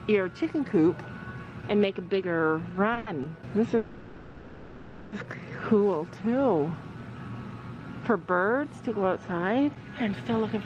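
Short stalls from late packets occur at 2.93 s and again at 2.98 s, back to back. At each, the next packet had not arrived in time, so the jitter buffer emptied and the receiver held the last sound for about 30 ms and then about 80 ms before resuming exactly where it left off. Nothing is lost, but the sound drags briefly with a faint buzzy smear, and the playback falls about 110 ms further behind.

A call audio freeze follows from 3.77 s to 5.14 s. For about 1.35 s the last sound is carried on as a fading buzz that never drops to true silence, and then the audio picks up from the point where it stopped. The likely cause is packets held up in transit long enough for the jitter buffer to run dry, leaving a 1.35 s gap inserted into the stream with no content missing.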